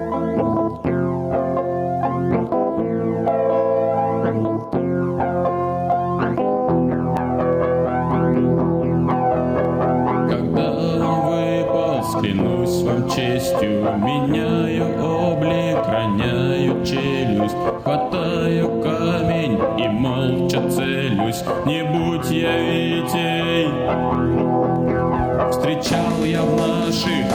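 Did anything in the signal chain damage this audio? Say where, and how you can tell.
Yes. Input gain was likely set far too high, with a fast limiter or compressor at the capture stage clamping down on every loud sound. Throughout, the level ducks by around 10 dB under each peak: audible gain pumping and squashed dynamics.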